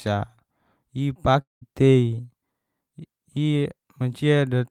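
From 1.41 to 1.63 s the speech smears into a fading buzz, then silence, and resumes with material skipped; the silent stretch marks it as likely a long network dropout.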